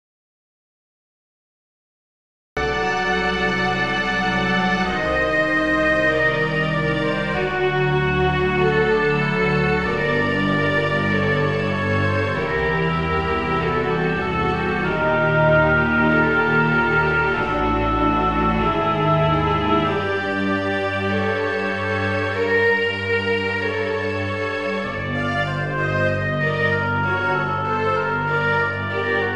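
From the very start until 2.57 s the clip is silent, an audio dropout to silence, likely from a lost input while recording continued. Unlike a quiet passage or noise gate, no room tone remains, and sound resumes abruptly mid-flow.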